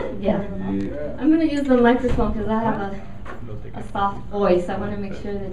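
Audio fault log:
0.31 s, 2.46 s, 4.16 s: lost LE Audio frames. Each gap lasts about 7.5 ms, which fits one dropped LC3 frame. The decoder repeats the last spectrum with scrambled signs. Each gap becomes a brief noisy smear instead of a clean dropout.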